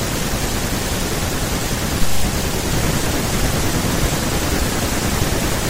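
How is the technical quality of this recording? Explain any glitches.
The recording has one glitch, a DC step at 2.93 s. At that instant the waveform's zero line jumps to a new offset, as happens when a converter recalibrates or an input carrying DC is switched into the path. The shift then bleeds away slowly, at the pace of a high-pass around 2 Hz. The sudden jump registers as a single low thump or click, while the speech carries on unchanged around it.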